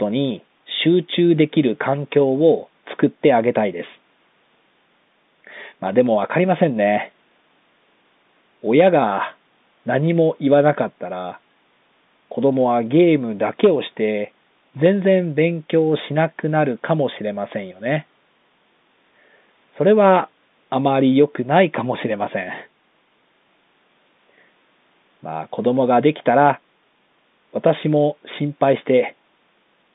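Nothing goes wrong anywhere in this one: the speech comes through as ordinary telephone audio, with G.711 A-law coding holding it to the usual line band of about 150 Hz to 3.7 kHz and the call's microphone processing trimming away the lowest bass just as it's meant to.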